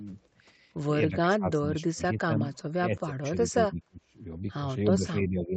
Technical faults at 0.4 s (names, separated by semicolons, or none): none